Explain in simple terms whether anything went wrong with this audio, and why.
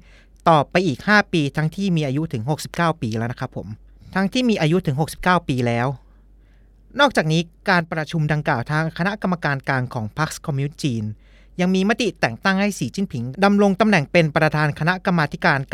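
Something does go wrong, briefly: from about 7.81 to 8.11 seconds the speech suddenly drops to roughly half its level, then snaps back. That's most likely one channel dropping out, where one side of the stereo pair goes silent and the combined sound gets quieter.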